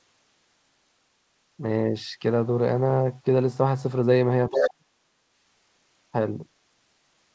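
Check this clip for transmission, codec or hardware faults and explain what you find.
Two related echo-control faults show up together in the middle of the clip, both around 4.5 s.

Speech suppressed in double talk, 4.49 to 4.9 s: the talker's speech drops by around 40 dB for roughly 400 ms, sounding gated or cut out. The likely cause is the echo canceller mistaking simultaneous talk for echo and attenuating everything. On a waveform the envelope collapses, and on a spectrogram a near-empty vertical band appears.

Other side's voice leaking through, 4.53 to 4.69 s: inside that gap, a second voice is audible for about 0.16 s at roughly 10 dB below the speech. It is likely loudspeaker echo the canceller failed to remove. On a spectrogram it shows as weak harmonic traces inside the suppressed band.

Throughout, nothing appears above 8 kHz, which fits a wideband call codec such as G.722.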